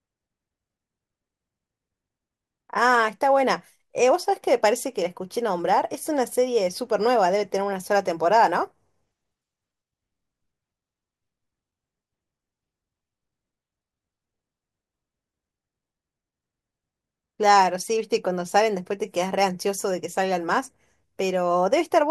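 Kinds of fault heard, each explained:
No technical faults are audible anywhere in the recording.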